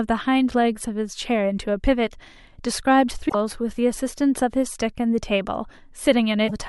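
Damaged data in a compressed stream occurs at 3.25 to 3.35 s and again at 6.47 to 6.51 s. Corrupted bytes make the decoder misread frames and lose sync while it hunts for the next header, so the speech breaks into a brief glitch each time.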